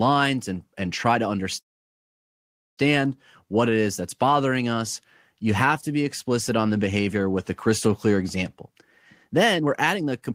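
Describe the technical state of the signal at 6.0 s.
At 6.0 s the speech signal is intact, with no audible technical fault at that point.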